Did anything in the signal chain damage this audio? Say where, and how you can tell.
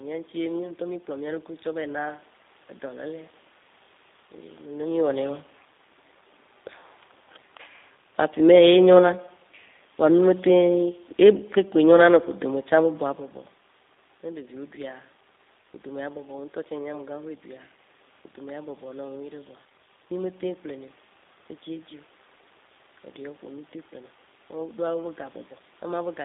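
Yes. Throughout the speech sounds rough and slightly synthetic, with the band confined to roughly 250 Hz to 3.7 kHz. That points to the codec stage, a G.729 codec at a rate that fits 8 kbit/s, rebuilding each frame from a vocal-tract filter and sparse pulses.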